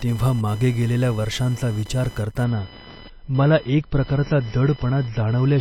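From the start, computer activity noise runs under the speech: a buzzing whine pulsing near 1 kHz, about 25 dB down, following the machine's load rather than the talking. At 2.44 s an adaptive stream switches to a lower bitrate and stays there to the end: the treble vanishes above 5.8 kHz and artefacts swell, fitting a fall from around 128 to 24 kbit/s MP3. It is a sudden step without any gap, not a gradual fade.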